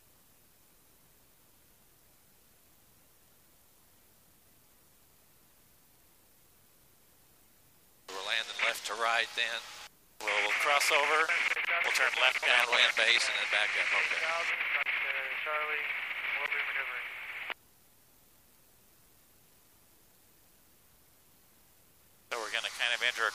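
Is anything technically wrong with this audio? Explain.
No, there's nothing technically wrong here that I can hear; it all sounds fine from beginning to end.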